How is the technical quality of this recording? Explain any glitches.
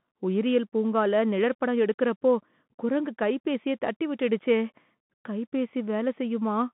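The recording is narrowband and audibly degraded throughout. A Bluetooth CVSD headset codec runs from start to finish. It encodes one bit per sample, stepping up or down with adaptive step size, which fits a 64 kbps stream. Nothing passes above 3.8 kHz, leaving a 150 Hz to 3.5 kHz band with scratchy s sounds and granular hiss under the speech.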